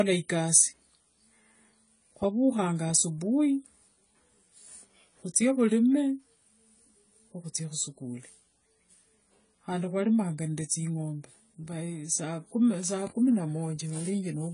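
From start to finish the speech is band-limited, with nothing above 10 kHz, and sounds dull, smeared and watery, with fizzy sibilants. The likely cause is AAC compression at a low bitrate, consistent with about 24 kbps, which narrows the bandwidth and starves the spectrum of detail.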